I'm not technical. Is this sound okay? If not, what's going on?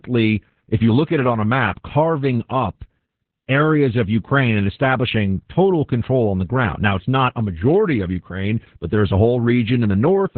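No. The speech has Opus voice compression damage from start to finish. The clip was squeezed hard into a narrow-band voice mode, so everything above about 4.4 kHz is gone, leaving it muffled like an old phone call, and the voice also sounds hoarse and slightly robotic. Plain filtering would only dull the sound. This adds rough, buzzy texture too, because the voice itself is rebuilt crudely, chunk by chunk.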